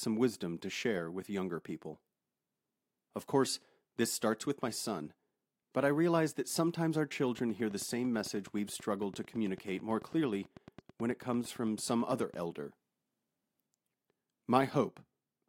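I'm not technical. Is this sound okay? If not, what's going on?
No. From 7.39 to 12.35 s, just after "realize that sometimes our", there is a train of clicks: roughly fifty evenly spaced ticks, about 9 per second, about as loud as the speech. The likely cause is electrical interference or a faulty connection or power supply.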